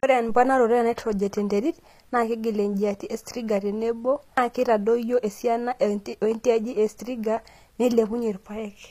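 From start to end the speech carries plainly audible HE-AAC compression damage, likely from coding at a low bitrate near 24 kbps. The treble is rebuilt from copied lower bands, so s sounds turn gritty and lispy. Nothing reaches above 14.9 kHz.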